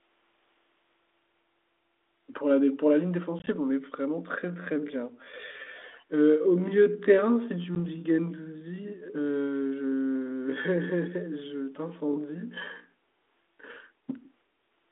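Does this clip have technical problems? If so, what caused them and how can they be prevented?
Yes. The clip has three kinds of fault, all on a phone line whose G.726 ADPCM coding, band-limited to roughly 250 Hz–3.6 kHz, adds only light damage of its own.

Packet loss on an ADPCM call hits between 3.39 and 3.48 s, with about 40 ms knocked out in short holes of up to 20 ms, then again at 7.75–7.80 s with a 10 ms gap. A handful of packets go silent, and the decoder's predictor and step size drift from the sender's, so the speech comes back slightly distorted before settling. A jitter buffer with packet-loss concealment, or better network prioritisation for the voice stream, would keep those holes from opening.

From 4.34 to 13.36 s there's a time-stretched section, running at about 0.66 times normal pace while the pitch stays put. This was likely done by software fitting the audio to a length, repeating short pieces to pad it out. 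Leave the original timing alone, or use a higher-quality stretch algorithm if you really need it.

An echo leak shows up at 5.77–6.05 s as a faint copy of the speech about 330 ms late and roughly 25 dB down. It's likely one side on a loudspeaker with an echo canceller that didn't remove all of it. A headset at that end, or a better-tuned canceller, would prevent it.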